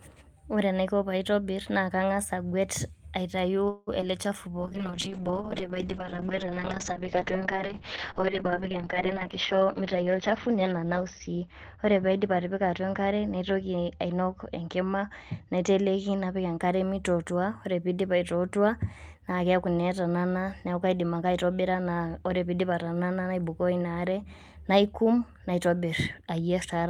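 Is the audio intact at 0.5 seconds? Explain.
Yes, the speech at 0.5 seconds plays through intact, with no dropout, click, distortion or other fault at that moment.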